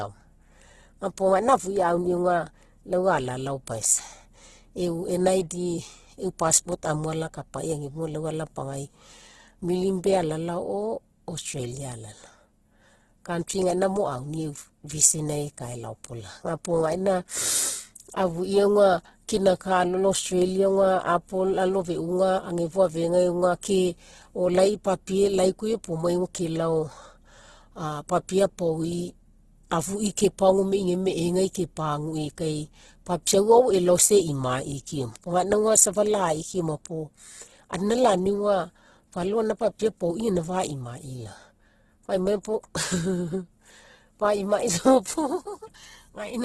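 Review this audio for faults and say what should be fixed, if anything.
Opus compression, likely, runs through the whole clip. Starved of bits, the encoder keeps each band's energy but refills detail with folded or noise-like content, so the speech sounds grainy and rough, and nothing remains above 12.3 kHz. The heavy damage points to a bitrate around 12 kbps. Encode at a higher bitrate, or keep an uncompressed master, to prevent it.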